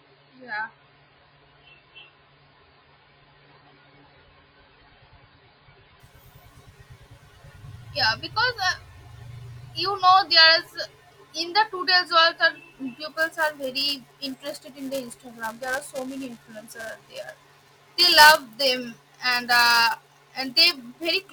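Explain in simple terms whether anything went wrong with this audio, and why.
For the first 6 seconds the speech sounds dull and smeared, with nothing above 5 kHz. This is an adaptive stream starting at a low bitrate, which then switches to a clearer version with no gap.

From 13.09 s to the end, a robotic buzz at about 375 Hz rides on the speech. This is buffer tearing: writing and playback overlap, so each small chunk contains a brief slice of audio from a few milliseconds earlier.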